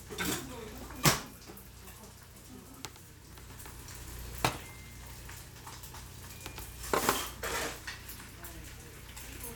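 Nothing goes wrong anywhere in this one; the sound just carries on without a single technical hiccup to point at.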